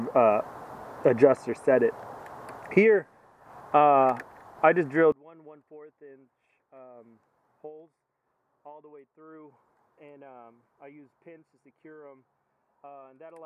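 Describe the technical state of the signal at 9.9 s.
At 9.9 s, likely one channel inverted: from 5.12 s to the end, reversed polarity cancels shared content on mono summing, leaving sound about 28 dB down.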